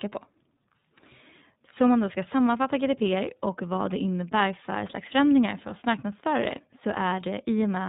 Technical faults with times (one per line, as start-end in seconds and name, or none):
0.00-7.89 iLBC codec